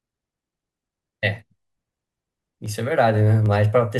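Two sharp single clicks land in the speech at 2.66 s and 3.46 s, each most likely dropped samples: under a millisecond of the stream goes missing, so the waveform jumps abruptly. Unlike a dropout, no audible sound vanishes; only the click marks it.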